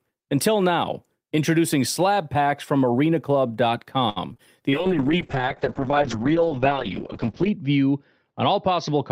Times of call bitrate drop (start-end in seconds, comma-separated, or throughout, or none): 4.72-9.12